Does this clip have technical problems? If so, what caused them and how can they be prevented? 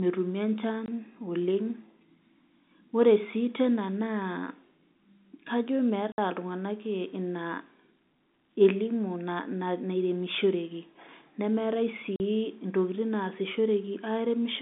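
Yes. The speech has packet loss filled with silence: hard-edged gaps at 0.86–0.88 s, 6.12–6.18 s and 12.16–12.2 s, lasting 20, 60 and 40 ms. The lengths are exact multiples of 20 ms, which fits a 20 ms packet. Those packet-sized lengths separate it from codec glitches. Plain silence, rather than smeared or repeated sound, shows no concealment was applied. The telephone band of about 150 Hz to 3.7 kHz is simply the G.711 telephone coding. To prevent the gaps, use a jitter buffer with packet loss concealment, or forward error correction, on the network path.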